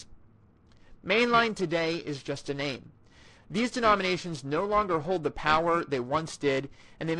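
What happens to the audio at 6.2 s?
The converter's sample clock is being shaken at a steady rate of around 1 kHz, periodic clock jitter that runs through the whole clip, 6.2 s included. Each frequency in the speech picks up sidebands spaced about 1 kHz either side, strongest on the upper content the mSBC headset link carries, giving a rough, metallic edge that disappears in pauses.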